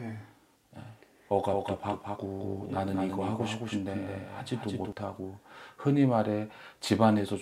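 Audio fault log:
1.50–4.92 s, doubled audio track: a dry, slightly quieter copy trails about 200 ms behind, cutting in and out abruptly, likely from a slower second capture path.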